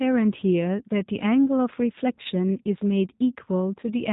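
Speech passed through a G.729 codec, which fits an 8 kbit/s stream. It sounds rough and synthetic, and a spectrogram shows nothing above 4 kHz. VoIP packet loss concealed by the speech codec occurs at 2.23–2.27 s and 3.81–3.86 s, each consistent with one lost 20 ms packet. There the decoder stretches the sound into a buzzy tone or coloured noise that fades.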